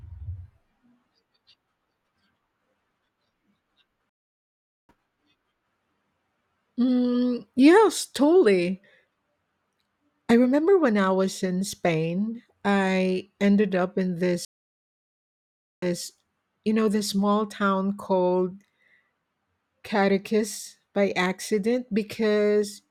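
At 4.09 s the speech drops into silence for about 0.8 s and comes back at 4.93 s a little further on, having skipped ahead by a bit under a second. After "I ended up in", at 14.45 s, it goes silent again for about 1.4 s and resumes at 16.02 s by repeating the last 0.2 s. Both gaps are a stream reconnect: the connection broke, the player went quiet, reconnected, and started a new decoder partway through the stream. The first time it resumed later in the stream. The second time the server resent a short earlier stretch.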